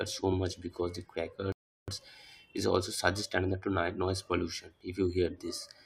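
At 1.52 s a rebuffering stall halts the speech for 0.36 s, a flat silent gap on the waveform, before playback resumes exactly where it stopped, nothing lost.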